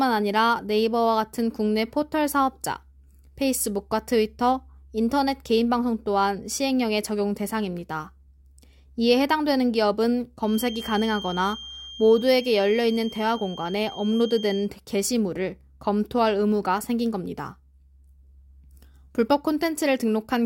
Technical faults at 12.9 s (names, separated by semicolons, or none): feedback whistle